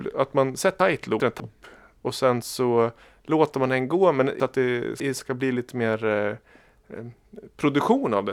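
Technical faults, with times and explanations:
0.8–1.4 s, chunks out of order: right after "att man" the speech turns briefly jumbled. A 200 ms chunk that arrived late plays two chunks after its proper place, so the sound jumps ahead and then back, leaving three hard joins.
4.4–5.2 s, chunks out of order: between "låter man den gå" and "ska bli lite mer" there is a longer scrambled stretch. Here a 200 ms chunk lands three chunks late.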